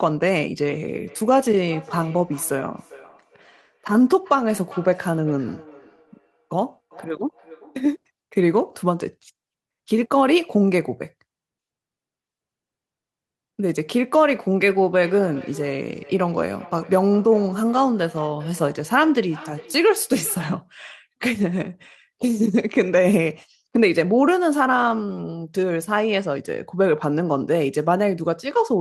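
Two devices in the same room are joined to one call, so each microphone picks up the other's loudspeaker and sends the sound back round, a path neither echo canceller removes. The result is feedback echo between two devices from 1.07 to 7.95 s and again from 14.79 to 20.59 s: the speech returns at a steady interval of roughly 0.4 s, thinner and more ringing, peaking at about 23 dB below the speech and then about 20 dB below it.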